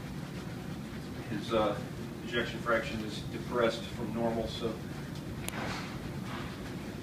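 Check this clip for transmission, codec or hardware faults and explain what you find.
One fault stands out: a file header played as audio at 5.49 s. It is heard as a sharp, loud click or snap that comes out of nowhere and has nothing to do with the surrounding sound. It happens when separate WAV segments are joined or streamed without stripping their headers, so the few dozen bytes of header data are read as sample values. That lone event suggests a piece boundary at that point.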